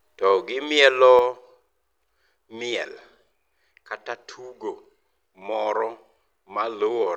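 At 1.19 s the whole level of the speech drops abruptly, by about 6 dB, and stays at that lower level to the end of the clip. The background noise falls by the same amount at the same instant, so the step is in the signal chain, not in the talker. This is a sudden gain jump, likely caused by a digital gain setting or bit shift applied between one sample and the next with no ramp to smooth the change.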